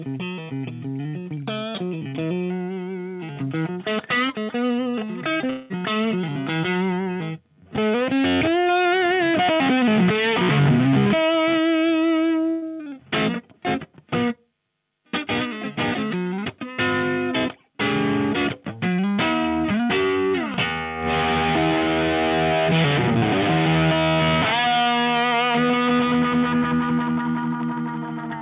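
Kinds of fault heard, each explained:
short concealed packet loss: Two quick smears sit back to back at 5.34 and 5.38 s, each a wobble where the sound seems to stutter in place. About 20 ms went missing each time, and the receiver patched each hole by continuing the preceding sound before blending back into what actually arrived. The fills are short enough to read as a brief smear or blur, though a brief element of the sound could have dropped out entirely.
long network dropout: From 5.50 to 5.72 s the sound turns into a held, fading tone or hiss for about 200 ms, then the real audio returns further on with that stretch missing. No silence is left behind, because the whole gap is covered by a synthetic continuation of the last sound. This is likely a network dropout: a run of audio that never arrived, coming just after the two smaller losses.
burst of packet loss: At 12.50 s the sound freezes into a buzzy or hissy continuation that dims over roughly 120 ms, then jumps ahead to 12.64 s with the material in between gone. 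Several consecutive packets were lost or came too late, and the receiver stretched the last good audio while turning it down. This is longer than the smears near 5.3 s.
loud pop: A single sharp pop lands at 20.54 s, lasting only about 23 ms and standing about 10 dB above the surrounding sound, which carries on uninterrupted underneath. A pulse like this is likely a sudden electrical step such as a plug, switch, static discharge or driver glitch, added to the signal and shaped by the circuitry after it, heard through a path that has no content above 4 kHz.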